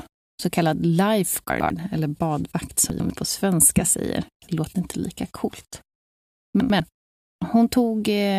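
Chunks out of order at 1.5–1.7, 2.9–3.1 and 6.6–6.8 s. Each time, a 100 ms chunk plays one chunk late. The speech jumbles briefly.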